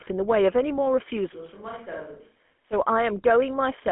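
Throughout, the speech carries GSM full-rate codec damage. The coder rebuilds the voice from a vocal-tract filter fed by sparse, regularly spaced pulses, giving a plainly audible buzzy, gravelly roughness consistent with 13 kbps GSM. The band sits within about 200 Hz to 3.4 kHz, with nothing above 3.8 kHz.

From 1.35 s to 2.72 s the sound turns suddenly roomy and hollow, thinner in the bass and roughly 10 dB quieter, with background noise around 35 dB below the speech. This is likely a switch to a distant microphone, such as a camera mic, after the close microphone dropped out.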